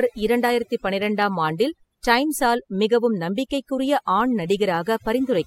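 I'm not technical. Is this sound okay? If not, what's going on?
No, it isn't quite right. The whole clip suffers from overdone noise removal: a cleanup tool was pushed too hard, so the background drops and breaks up into little twinkling specks, and the quieter parts of the voice got scrubbed away too.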